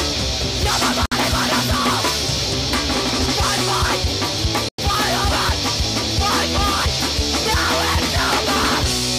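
At 1.06 s and 4.69 s the sound cuts out for 60 ms and 100 ms, flat in the waveform and blank across the spectrogram, likely Bluetooth stalls.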